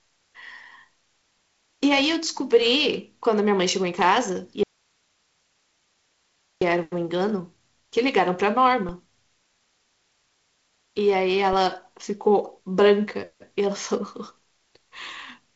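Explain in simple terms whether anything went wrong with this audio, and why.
Something did go wrong: an audio dropout to a faint residue. From 4.63 s to 6.61 s, about two seconds, the speech vanishes and only a soft hiss remains, far quieter than the talking. It is not a natural pause or a fade, because the sound stops and returns abruptly and the hiss shows the line was still open. The likely cause is the signal itself being lost for a moment. The wideband telephone-style sound elsewhere is normal.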